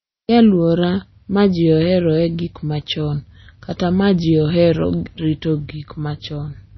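All the way through, the speech sounds watery and swirly, with nothing above about 5.9 kHz. That's likely heavy MP3 compression, at a low bitrate, maybe around 24 kbps.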